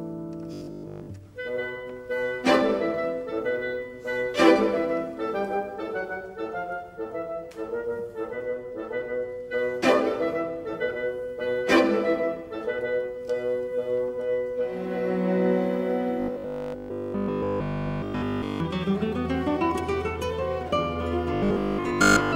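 Robotic sound from repeated short buffers appears at 0.54–1.08 s, 16.20–18.60 s and 21.35–22.35 s as a rigid, metallic 50 Hz buzz. It is likely caused by a 20 ms block being looped while new audio arrived late, and it is near-total in the middle stretch. A spectrogram shows evenly spaced horizontal lines every 50 Hz, and the waveform repeats every 20 ms.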